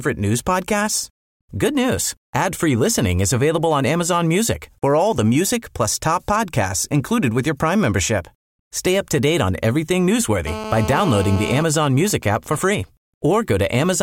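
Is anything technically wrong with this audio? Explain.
Yes, there are two bursts of radio interference from a 2G mobile phone in this speech clip.

From 10.47 to 11.63 s there is GSM phone buzz, a hard, raspy buzz at about 9 dB below the speech. A nearby phone in a call transmits radio pulses 217 times a second, and the audio circuitry rectifies them into a tone with dense harmonics. Mains hum is smoother and sits at 50 or 60 Hz. This buzz is harsher and sits at 217 Hz, and it has no relation to the speech.

From 11.74 to 12.59 s come GSM signalling bursts, fainter than the buzz at roughly 15 dB down. The phone is still in the call, but its user has gone silent, so it transmits only short groups of pulses. These are rectified the same way and heard as even ticks with a longer 217 Hz buzz twice a second. Random clicks or dropouts would be irregular, whereas this rhythmic pattern with its 217 Hz core points to a phone.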